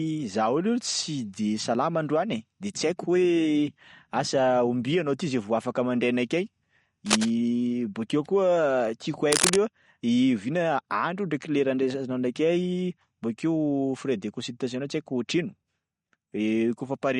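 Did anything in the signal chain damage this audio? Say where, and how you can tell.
Yes. At the codec stage, the speech was most likely squeezed through MP3 compression at a low rate, one that fits roughly 48 kbps. Plainly audible watery, swirly smearing runs throughout as weak frequency lines drop in and out between frames, with nothing above 21.1 kHz.

In the analogue wiring, two bursts of cable scratch noise sit at 7.06–7.31 s and 9.32–9.58 s. The first is about as loud as the speech and the second somewhat louder. A worn cable or connector being moved is the likely cause, its contact resistance jumping to add harsh rustling.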